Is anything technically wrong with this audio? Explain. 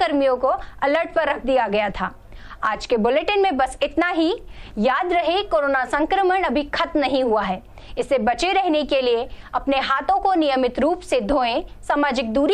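No, no technical faults audible.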